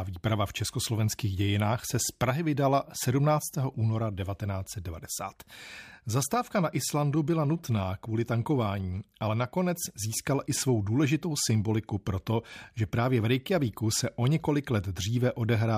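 No technical faults can be heard anywhere in this speech recording.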